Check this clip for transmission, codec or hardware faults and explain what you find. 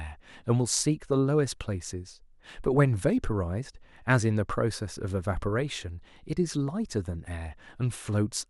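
One fault is audible: DAB burbling. From 5.57 to 5.67 s, weak reception lets bit errors through, corrupting a few MP2 frames. Wrong samples in single sub-bands give brief noise blips over the speech.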